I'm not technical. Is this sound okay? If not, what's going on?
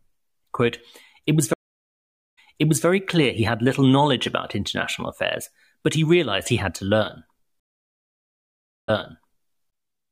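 No. Stream reconnects at 1.53–2.86 s, after "it was" (0.84 s silence), and at 7.60–9.53 s (1.29 s silence). The connection dropped, and the audio restarts about 0.49 s and 0.65 s earlier, repeating a moment before "clear he had little."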